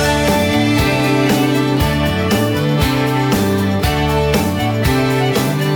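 No faults are audible anywhere in the clip.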